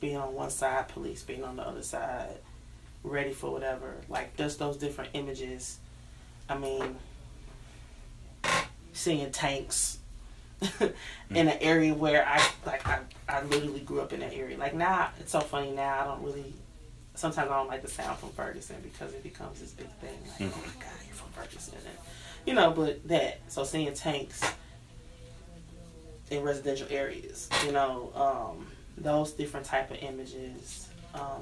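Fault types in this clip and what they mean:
No technical faults can be heard anywhere in the audio: the signal holds steady throughout, without any break, distortion or level problem.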